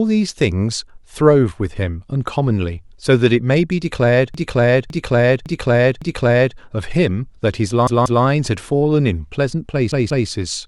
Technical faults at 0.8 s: none

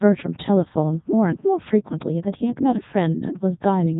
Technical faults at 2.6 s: Codec 2 vocoder

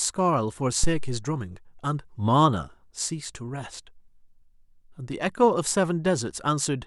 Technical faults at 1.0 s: phantom power thump

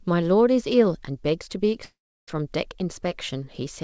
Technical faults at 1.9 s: long network dropout

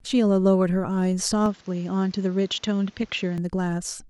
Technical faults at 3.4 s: input switched to a poorer device

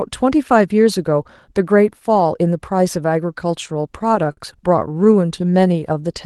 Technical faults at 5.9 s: jitter buffer slow-down

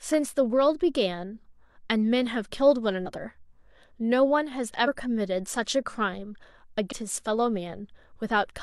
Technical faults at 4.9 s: compressed frames skipped

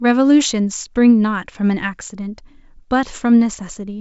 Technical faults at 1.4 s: none

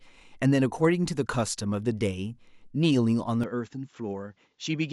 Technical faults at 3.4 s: input switched to a poorer device

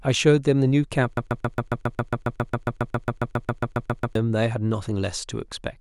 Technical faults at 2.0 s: broken-record loop

